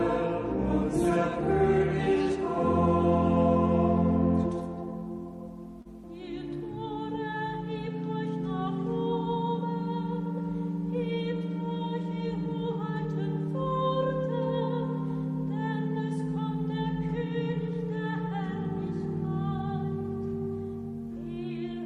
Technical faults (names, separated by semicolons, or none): short stall from a late packet